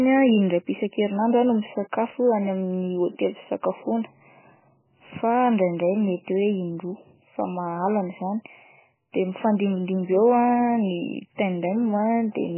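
A speech recording carries two faults that run its whole length. A steady USB whine sits at 8 kHz, some 35 dB below the speech. It is the 125-microsecond microframe rate of the USB bus leaking in through power or ground, and on a spectrogram it is a thin, unbroken horizontal line at 8 kHz. The speech itself sounds watery and swirly, with smeared consonant attacks. The likely cause is heavy MP3 compression at a very low bitrate, around 10 kbps, which cuts the treble and switches weak frequency lines on and off. On a spectrogram this shows as a hard ceiling on the speech's treble and patchy, speckled gaps below it.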